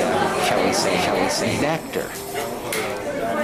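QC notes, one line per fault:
0.0–1.68 s, doubled audio track: the sound is already doubled when the clip opens. A second full-band copy trails the original by about half a second, at roughly the same loudness. It has no decay or room colour, so it reads as a flat, out-of-step repeat rather than an echo. It stops abruptly at 1.68 s. The likely cause is a second capture through a slower path, or an edit holding two misaligned copies.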